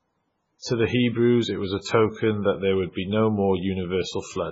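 MP3 compression runs through the whole clip. Nothing in the speech reaches above 7.6 kHz, and the sound is heavily damaged, watery and swirling, with smeared attacks. The likely cause is an encoder short of bits, consistent with a very low bitrate around 16 kbps, cutting the treble and dropping weak frequency lines.

Pre-echo appears at 0.59 to 0.64 s and again at 1.81 to 1.86 s, between "it was a" and "that there would". A sharp attack late in a transform block spreads its quantisation noise backwards, so a hiss of about 54 ms and then 44 ms precedes each softened onset.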